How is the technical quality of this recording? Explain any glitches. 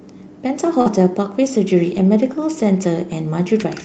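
The recording has audible network glitches in two places, on top of a call path whose coding noise and roughly 8 kHz upper limit are consistent with Opus at around 40 kbps.

From 0.81 to 0.88 s there is short concealed packet loss. About 40 ms of audio never reached the decoder in time, so the receiver invented roughly 43 ms of fill by extending the preceding sound, repeating its pitch where it was voiced or shaping noise where it wasn't, before crossfading back into real audio. The result is a brief smear or wobble, and any short consonant in that span can disappear.

Overlapping the end of that gap, from 0.86 to 0.88 s, and again from 1.94 to 2.00 s, there are lost packets rebuilt from error correction. Here the lost audio was recovered from a low-bitrate duplicate carried in the following packet, Opus's in-band forward error correction. The first repair covers 20 ms and the second covers 40 ms, which fits two 20 ms packets. 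Nothing drops out, but those stretches sound grainier and noisier than the surrounding audio, because the backup copy is coded much more coarsely.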